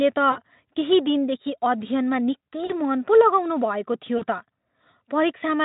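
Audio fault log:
0.31–0.39 s, 2.65–2.80 s and 4.17–4.23 s: VoIP packet loss concealed by the speech codec. Each time, about 40 ms of speech drops out, which fits two lost frames. The decoder fills the gap by repeating its last pitch and filter at falling gain. The speech smears into a buzzy tone or coloured noise that fades. Recovery is not instant, because each frame builds on the one before. The middle event spans the longest, about 0.15 s. The Speex decoding, which points to about 18 kbps, adds little of its own.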